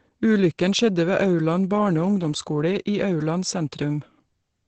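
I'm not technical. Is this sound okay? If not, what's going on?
No. For the whole clip the speech sounds muffled and hoarse, with nothing above about 8.7 kHz. This is likely heavy Opus compression, squeezed so hard that the encoder switched to its speech mode, which trims the treble and roughens the voice.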